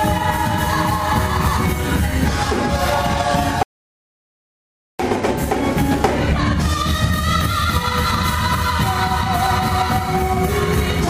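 An audio dropout to silence runs from 3.63 to 5.00 s: the sound cuts out mid-flow for about 1.37 s, leaving dead silence with no room tone, likely from a lost input.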